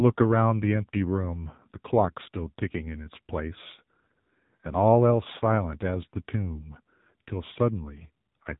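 From start to finish the speech has passed through the AMR narrowband mobile codec, the AMR-NB coder used on 2G and 3G calls. Nothing above 3.8 kHz survives, so consonants lose their edge and the sound is boxed into a telephone band. Damage is heavy: the vocal-tract model, fed by only a few pulses per frame, leaves the voice buzzy and synthetic, which fits one of the codec's lower modes, around 6.7 kbps.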